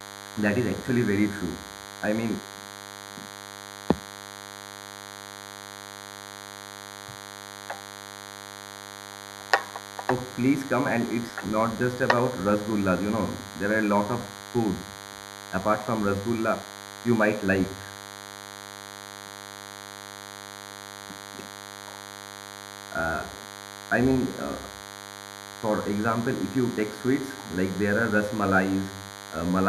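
A thin, steady buzz sits under the speech from start to finish, well below the talker but plainly audible, pitched at 100 Hz with a dense spread of harmonics. This is DECT cordless phone buzz: a nearby handset or base pulses its radio every 10 ms, and the audio circuitry rectifies those bursts.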